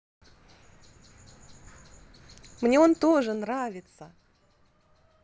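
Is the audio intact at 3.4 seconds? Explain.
No. From 2.82 to 3.58 s the level drops by about 15 dB in unsmoothed 2 dB steps, roughly ten per second, producing zipper noise: a ticking that rides on the speech. The waveform shows a staircase envelope; the spectrogram shows faint vertical click lines.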